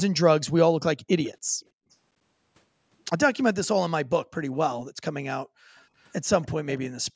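Faint delayed scraps of speech at 1.24, 1.91, 6.0, 6.42 and 6.7 s point to echo leak, likely from a loudspeaker echo canceller. Each scrap trails the speech by about 290 ms and shows as a faint copy of its harmonics on a spectrogram.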